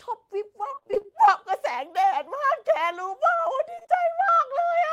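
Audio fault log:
0.71–1.12 s, repeated packet loss (robotic sound): roughly half of this stretch is concealment. The holes, up to 27 ms each, are filled by extending the preceding sound, giving choppy sound with pieces missing. A spectrogram shows smeared, frozen harmonic slices repeating at short intervals, and the waveform shows periodic, near-identical cycles.
3.75–4.04 s, repeated packet loss (robotic sound): a shorter burst with gaps up to 19 ms, again about half concealed, showing the same stuttered, repeated spectral slices.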